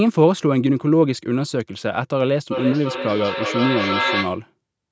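From 2.51 to 4.49 s the speech keeps returning about every third of a second, thinner and ringing, peaking only about 4 dB below the voice: feedback echo between two devices sharing the call.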